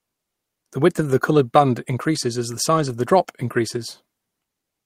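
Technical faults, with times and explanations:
2.77–2.91 s, lost packet rebuilt from error correction: the speech turns briefly rougher and grainier without any gap. Each lost packet was replaced by a low-bitrate copy carried in the following packet. About 80 ms was rebuilt this way, which fits four lost packets.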